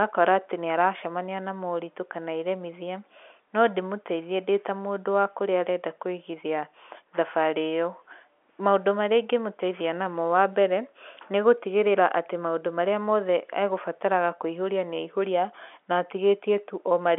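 Nothing's actually wrong here: it's speech carried over ordinary G.711 telephone coding, so the sound tops out around 3.8 kHz the way a phone line always does, and there's no fault to point to anywhere in it.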